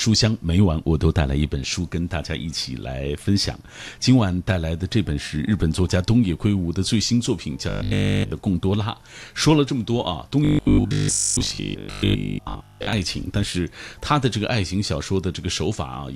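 From 7.69 to 8.31 s, and again from 10.45 to 12.93 s, the speech becomes a rigid 50 Hz metallic buzz: robotic sound from repeated short buffers, likely a 20 ms chunk replayed in place of nearly all the audio in the first stretch and most in the second.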